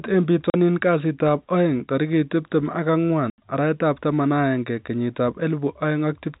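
At 0.50 s the speech drops to dead silence for 40 ms, just before "kasitab aeng", and at 3.30 s a longer 80 ms hole opens. This is packet loss filled with silence. The receiver had nothing to play and inserted zeros, and both gaps fit whole 20 ms packets. Unlike concealed loss, nothing is smeared or repeated, and the 4 kHz-limited telephone sound of the G.711 coding carries straight through on both sides.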